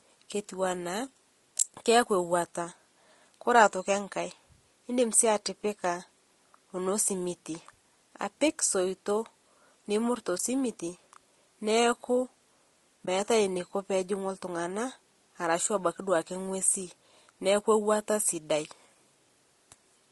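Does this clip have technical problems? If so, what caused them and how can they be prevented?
Yes. Throughout, the speech sounds rough and grainy, with noise filling the gaps between harmonics and a thin, synthetic top band. This is likely low-delay AAC compression such as AAC-ELD: its short frames resolve pitch harmonics poorly, and the damage fits a low bitrate near 32 kbps. Raising the bitrate, or using a longer-frame codec where latency allows, would prevent it.

AAC frame loss with muting occurs at 10.37–10.40 s and 13.05–13.08 s. Each time the decoder zeroed a missing frame of about 20 ms, and the overlapping windows faded the sound out and back in, leaving a brief dip. Packet loss concealment or forward error correction on the transport would prevent these gaps.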